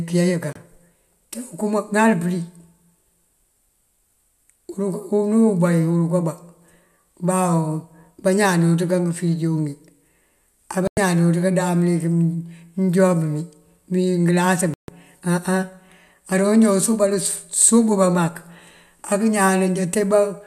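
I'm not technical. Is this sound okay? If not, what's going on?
No. The speech cuts out to silence three times: a tiny blip from 0.53 to 0.56 s, a longer gap from 10.87 to 10.98 s, and the longest, about 0.15 s, from 14.74 to 14.89 s. These are digital broadcast dropouts. The receiver briefly lost the signal or received damaged chunks of data, so it went quiet until clean data arrived. Whatever was said during those moments is simply gone.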